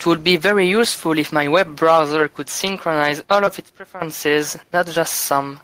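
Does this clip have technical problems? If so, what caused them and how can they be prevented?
Yes. Gain pumping runs through the whole clip: the level swings by about 5 dB as a fast limiter or compressor clamps down on each loud syllable. The quiet room noise sits about 43 dB below the speech. This is likely caused by input gain set far too high for the microphone, which pushes the limiter into constant action. Lowering the microphone gain until peaks sit well below the limiter threshold prevents it.

Short concealed packet loss occurs from 3.45 to 3.49 s. About 20 ms of audio never arrived in time, and the receiver patched roughly 11 ms of the gap by extending the preceding sound before crossfading back into the real signal, leaving a brief smear in the speech. A steadier network connection or a larger jitter buffer prevents it.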